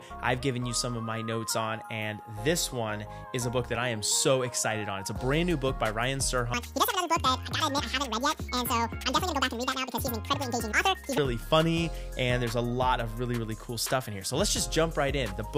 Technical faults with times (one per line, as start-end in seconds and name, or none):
6.54-11.18 section at the wrong speed